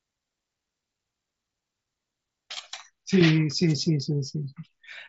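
At 2.58 s a brief concealed Bluetooth headset packet loss occurs. About 7.5 ms of audio, consistent with one missing frame, is filled from the preceding waveform and is nearly inaudible. From 3.66 to 3.76 s a wireless microphone noise hit, caused by the radio signal fading, raises receiver noise into a short swish of static over the mSBC-coded speech.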